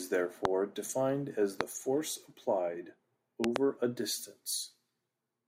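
A speech clip carrying three loud pops: a single one at 0.45 to 0.47 s just before "defined as", another at 1.61 to 1.63 s just before "force applied", and a double pop at 3.44 to 3.58 s after "force applied". Each stands roughly 20 to 25 dB above the speech, and the speech carries on underneath rather than breaking off as it would in a dropout. That points to a likely voltage pulse from a plug, switch, static or driver glitch.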